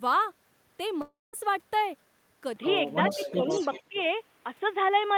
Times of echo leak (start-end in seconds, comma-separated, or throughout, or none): 3.08-4.03